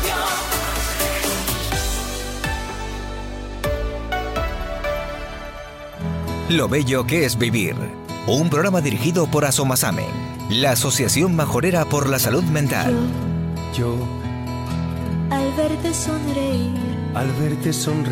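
No dropouts, distortion, timing errors or other technical faults are audible anywhere in the recording.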